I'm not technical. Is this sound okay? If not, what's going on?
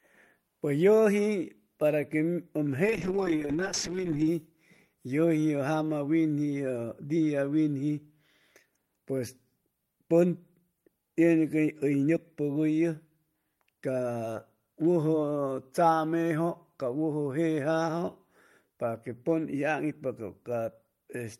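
No. From 2.84 to 4.35 s the speech turns rough and muffled: a call bitrate drop, where the connection briefly squeezed the sound into far less data.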